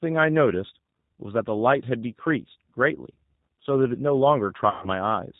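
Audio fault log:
Throughout: G.729 codec. The speech is rebuilt at 8 kbit/s from a vocal tract filter, pitch predictor and a few pulses per frame, so nothing passes above 4 kHz and the voice sounds rough and synthetic, unlike a simple low-pass filter, which would only sound muffled.
4.70 to 4.89 s: VoIP packet loss concealed by the speech codec. About 120 ms of audio is missing, which fits six lost 20 ms packets. The decoder stretches the last sound into a buzzy tone or coloured noise that fades rather than leaving a silent gap, and the voice stays weak or distorted after packets return.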